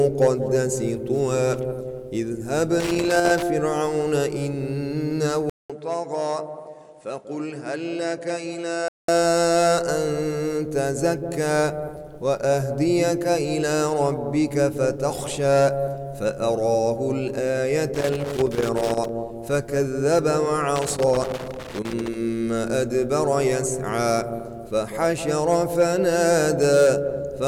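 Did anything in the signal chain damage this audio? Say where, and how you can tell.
Yes. Irregular bursts of scratchy crackle break up the sound at 2.80 to 3.43 s, 17.95 to 19.09 s and 20.76 to 22.14 s. This is loose connector crackle in the analogue wiring: a worn contact making and breaking chops the signal.

From 5.50 to 9.08 s, a 200 ms silence is followed by duller, boxier sound that drops roughly 10 dB, loses everything above 10.2 kHz and carries a new noise floor around 45 dB down. The likely cause is the input switched to a poorer device at the driver level.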